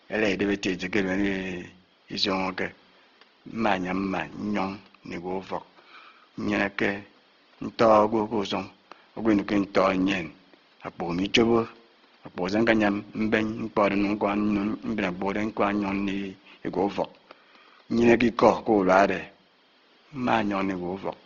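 Throughout, the speech sounds rough, grainy and band-limited, likely Opus compression in its music (CELT) mode starved of bits, which fits a rate near 16 kbps.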